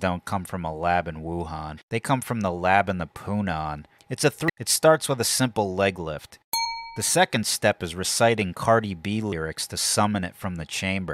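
At 1.77, 4.48, 6.64 and 9.31 s there are brief disruptions, each lasting about 12 to 17 ms. They point to damaged data in a compressed stream. The decoder misreads corrupted frames, loses sync and hunts for the next frame header, leaving a chirp, squawk, click or short hole in the sound.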